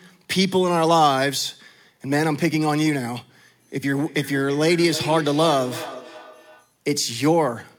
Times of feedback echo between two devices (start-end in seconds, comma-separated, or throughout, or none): 3.96-6.76